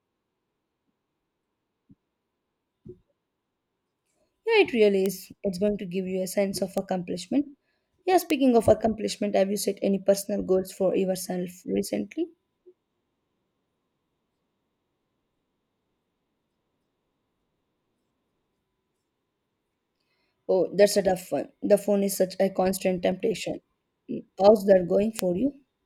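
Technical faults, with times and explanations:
2.50 s and 23.12 s, dropped buffer (overrun): each is a small forward jump in the speech, with no gap of silence. The likely cause is samples overwritten before being read, losing about 10 ms at 2.50 s and about 15 ms at 23.12 s, just after "is such a constant", with the two sides spliced directly.
5.06 s, 6.78 s, 8.30 s and 25.19 s, bit error spike: each is a single sharp broadband tick unrelated to the speech. At 5.06 s it lands just before "is it's going to", and at 6.78 s between "a sense of" and "accomplishment yeah". A flipped bit throws one sample (5.06 s) or two adjacent samples off by a power of two before they return.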